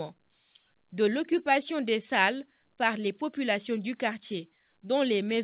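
No technical faults are audible; the sound has the narrowband character of a call, with nothing above about 4 kHz, which fits a telephone-grade codec on the call path, and the lowest bass trimmed as ordinary call microphone processing does.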